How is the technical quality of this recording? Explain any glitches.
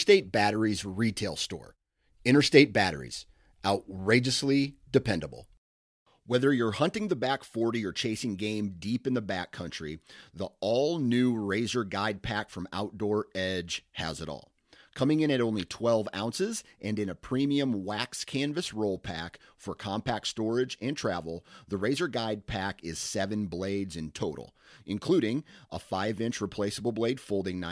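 No glitches or technical faults can be heard anywhere in the recording, so there is nothing to explain.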